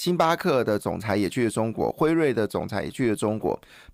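A speech recording with no audible technical faults.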